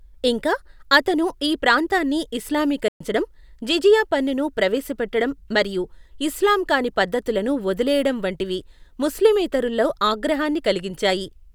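At 2.88 s the speech just drops out into silence for about 120 ms, then picks up again at 3.01 s. That's a playback stall: the player most likely ran dry of buffered data or got its thread held up, so output went quiet until it caught up.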